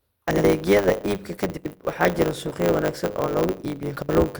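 From the start the speech carries a block size mismatch (truncated): each block loses its tail before the next stage reads it, leaving a 100 Hz buzz and a 1.09 times speed-up at roughly normal pitch. A spectrogram shows vertical seams every 10 ms.

Frames out of order occur at 0.31 to 0.44 s, 1.56 to 1.75 s and 3.96 to 4.09 s, where two adjacent runs are swapped, which fits runs of three, four and three frames. Each sounds like a garbled flutter.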